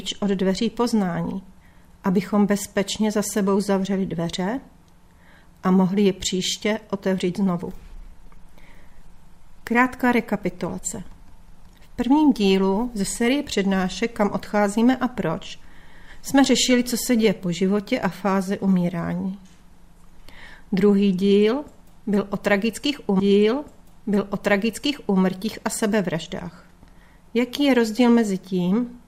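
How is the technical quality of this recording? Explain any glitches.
There is one glitch. At 23.19 s a stream segment repeated: the player queued the same two-second segment twice. The sound jumps back with a small blip and replays until 25.19 s.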